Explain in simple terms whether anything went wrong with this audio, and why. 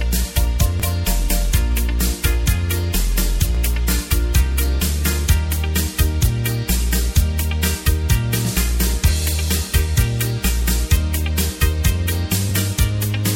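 Three quick hiccups at 0.80–0.82 s, 3.55–3.57 s and 12.49–12.51 s are Bluetooth stutter: missing wireless data made the player repeat an 18.7 ms slice before catching up.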